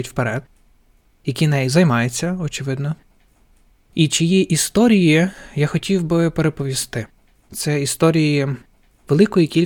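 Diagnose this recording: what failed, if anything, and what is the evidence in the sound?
Nothing failed: no stage from capture through storage and playback leaves any audible evidence of trouble in this speech recording.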